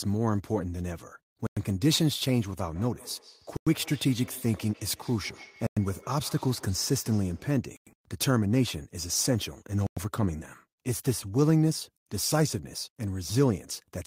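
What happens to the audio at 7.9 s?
A 100 ms gap between chunks, 7.77 to 7.87 s: silence at a 2 s chunk join, heard as an abrupt hole, seen as a hard-edged blank.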